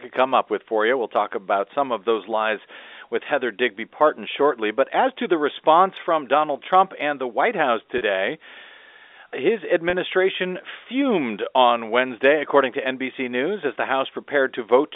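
At 7.98 to 8.01 s and again at 9.90 to 9.93 s, the speech has packet loss with pitch repetition. Each gap is 30 ms, consistent with a single dropped packet, and the receiver filled it by repeating the last pitch period of the preceding speech. Because each loss is so short, the patch never fades to silence. It comes across as a brief held, slightly buzzy tone before the speech resumes, all over the narrow G.711 telephone band.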